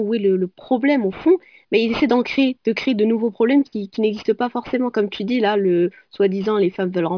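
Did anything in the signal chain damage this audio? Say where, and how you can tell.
Yes. A sample-rate conversion stage decimated the speech without an anti-aliasing filter, which fits a drop from 44.1 kHz to about 11 kHz. Throughout the clip, energy above 5.5 kHz folds back below it, producing aliasing: gritty, metallic sibilants roughly 25 dB under the speech, and a spectrum packed hard against the 5.5 kHz edge.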